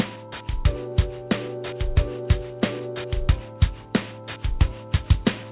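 Aliasing runs through the clip. The rate was cut, apparently to 8 kHz, with no filter first, so content above 4 kHz folds back as gritty, unrelated tones around 15 dB down. A spectrogram shows energy pressed hard against a 4 kHz ceiling.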